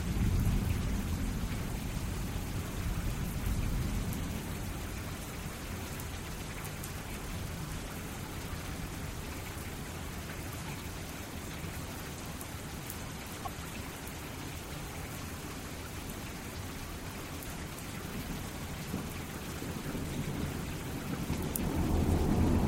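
At 13.45 to 13.47 s, a corrupt frame was decoded. Damaged bits misplaced energy across a single frame, producing a brief chirp, squeak or blip, peaking around -25 dBFS, within the sound.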